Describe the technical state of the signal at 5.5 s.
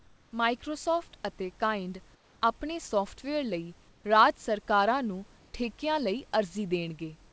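From 5.39 to 5.54 s, comfort noise replaces the background: the room noise becomes steady, featureless hiss, about 1 dB different, likely from discontinuous transmission.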